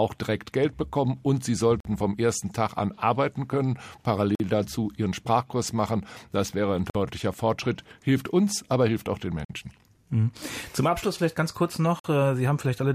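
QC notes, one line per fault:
1.80 to 12.00 s, gap between chunks: hard-edged silent holes of about 48 ms at 1.80, 4.35 (between "an arbeiten können" and "dazu ihren"), 6.90, 9.45 (after "aber hilft auch den") and 12.00 s (after "vielleicht ganz kurz"). The speech arrives in 2.5 s chunks, and silence is inserted at each join.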